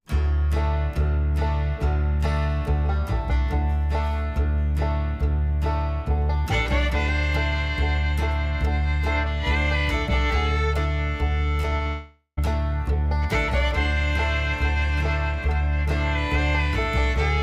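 From 11.61 to 11.87 s there is repeated packet loss, giving a choppy, robotic sound. Four short holes, none longer than 20 ms and about 80 ms in all, are each filled by stretching the sound just before it, so roughly a third of this quarter-second is patched rather than real. On a waveform the envelope turns stuttery and repetitive. A spectrogram shows brief blocks of smeared, copied harmonics with hard vertical edges between them.

Straight after, from 11.87 to 12.39 s, comes a long network dropout lasting about half a second. The last sound carries on as a fading buzz-like tail that loses its detail and decays, ending in about 90 ms of silence before the audio resumes with that stretch missing. This is likely a link outage during which no packets arrived. A waveform shows a smooth, shrinking, periodic tail dropping to a flat line. On a spectrogram, frozen horizontal bands fade out into a dark gap.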